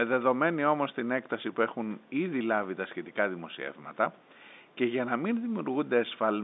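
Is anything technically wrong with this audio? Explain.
No, nothing technically wrong here.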